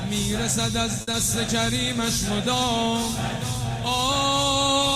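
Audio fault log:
1.01–1.09 s, short stall from a late packet: the jitter buffer ran empty, so the last sound was stretched for about 60 ms until the packet arrived, giving a held, slightly buzzy moment.
1.11–1.15 s, short concealed packet loss: 20 ms of audio never reached the decoder, so the receiver continued the preceding sound to fill the gap, heard as a brief smear before the real audio resumes.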